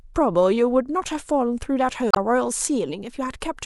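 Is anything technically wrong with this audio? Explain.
Yes. Damaged data in the compressed stream shows up from about 2.11 to 2.18 s in this speech recording. For roughly 70 ms, part of the encoded data reaching the decoder is corrupt, so it cannot reconstruct those frames properly. It loses its place in the stream and has to hunt for the next valid frame header before normal decoding resumes. That brief stretch of bad decoding comes through as a short chirp, squawk, click or hole that interrupts the speech.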